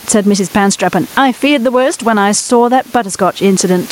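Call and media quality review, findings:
Background swells between phrases and ducks under each loud syllable throughout, level swinging around 15 dB; gain pumping, likely mic gain set too high with a fast limiter clamping peaks. Room noise sits about 33 dB below the speech.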